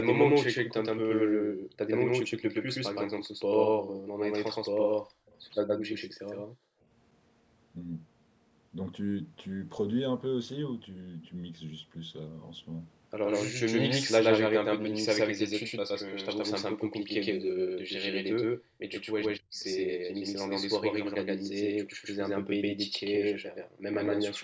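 A speech recording carried through a call's microphone processing, with nothing above 8 kHz. A doubled audio track, likely from a second capture path or an out-of-step edit, runs throughout: a full-band copy at roughly equal level trails by about a tenth of a second. The echo canceller gated the background while the loudspeaker played, dropping the room sound at 1.36–1.79 s (about 23 dB) and by about 40 dB at 3.26–4.05, 5.05–6.87, 17.7–18.81, 19.93–20.09 and 21.93–23.82 s before it recovered. Speech was suppressed in double talk at 19.22–19.5 s, likely because the canceller confused the talker with the far side, cutting the voice deeply for a fraction of a second. An echo leak, likely from incomplete cancellation at a loudspeaker end, returns a faint scrap of voice 224 ms late at 19.60–19.64 s, about 30 dB below the speech.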